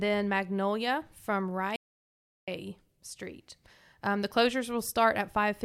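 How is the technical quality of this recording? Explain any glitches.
The input feed likely dropped out from 1.76 to 2.48 s, with the recorder writing silence throughout: an audio dropout to silence. For about 0.72 s the speech stops dead, leaving silence with no room tone, then resumes abruptly mid-flow, and that stretch of speech is lost.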